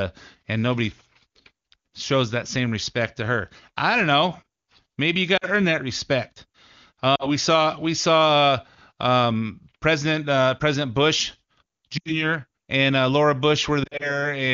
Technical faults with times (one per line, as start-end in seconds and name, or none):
5.37-5.46 lost AMR speech frames
7.15-7.28 lost AMR speech frames
11.97-12.12 lost AMR speech frames
13.83-14.26 lost AMR speech frames